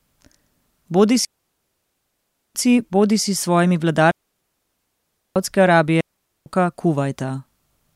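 A digital wireless link between source and receiver repeatedly lost too much data, so the receiver muted this speech clip three times: a digital wireless dropout from 1.25 to 2.55 s (1.3 s) ending just before "bodisi s svojimi", another from 4.11 to 5.36 s (1.25 s) right after "bodisi s svojimi", and a shorter one from 6.01 to 6.46 s (0.45 s). Each is a clean hole of near silence with a very short fade and no noise burst on either side.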